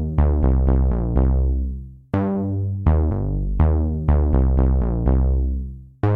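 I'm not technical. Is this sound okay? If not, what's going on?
Yes, this music clip is fine: nothing in it points to a technical problem with the recording or its playback.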